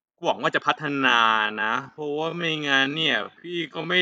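At 0.80 s the speech abruptly drops to half its pace and stays that way to the end of the clip, yet its pitch does not fall. That combination marks a time-stretched section rather than a slowed playback or tape drag, where pitch would sink with the tempo. The likely cause is software lengthening the audio by repeating short fragments to hold pitch, which leaves the speech dragging.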